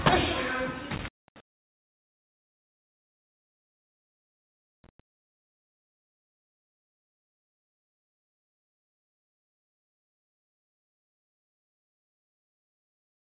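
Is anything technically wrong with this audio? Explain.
Yes. There are two kinds of fault, heard through a narrow call-quality band with nothing above 4 kHz, which fits a G.711 mu-law line at 64 kbps.

Intermittent contact occurs twice, between 0.95 and 1.40 s and between 4.84 and 5.00 s. Each time the sound drops out abruptly, with crackle at both edges and faint hiss underneath. The first gap lasts about 187 ms and the second about 107 ms. This is a loose cable or plug briefly losing its connection, so the signal path opens and then snaps shut again.

At 1.26 s a sound starts abruptly, missing its soft beginning. About 20 ms of the onset has been replaced by smooth comfort noise. The likely cause is a clipped onset from the sender's voice detector, which reacted late when sound resumed. The first instant was never transmitted, and the receiver filled the space with generated background noise.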